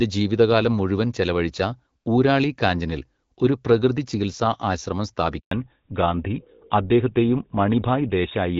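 Speech cuts out abruptly at 5.39 s and stays silent for 120 ms until 5.51 s, a handover gap where the call switched networks and no speech frames arrived. From 5.51 s to the end, the speech turns duller and rougher with nothing above 4 kHz, a fallback to narrowband as the call dropped from the AMR wideband (HD Voice) codec, whose light coding sound fits 12.65 kbit/s before the switch, to what sounds like GSM full rate.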